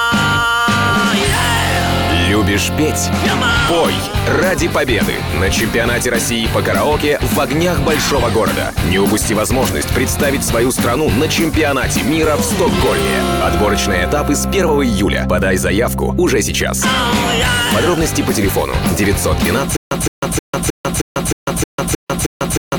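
The audio breaks into a stutter with silent gaps from 19.76 s through to the end: a 165 ms burst repeats nine times, each followed by about 147 ms of digital silence, giving an even 312 ms cycle. The likely cause is a stalled player or stream replaying its last buffered fragment at each retry, so the material that should follow is lost. On a spectrogram this appears as identical blocks alternating with blank columns, and the waveform drops to a flat line between bursts.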